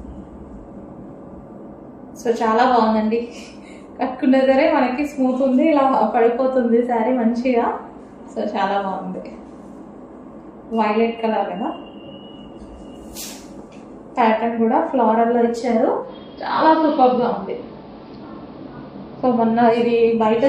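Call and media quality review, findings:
Dull, band-limited sound with faint hiss, 16.01–19.79 s, no level jump. Digital radio blending to analogue: hybrid receiver lost digital, cross-faded over about 0.1 s to the AM simulcast, then blended back.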